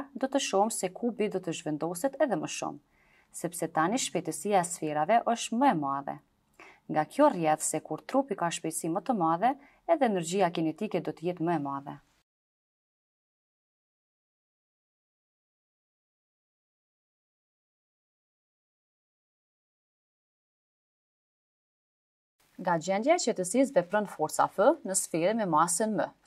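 Nothing is technically wrong with this audio.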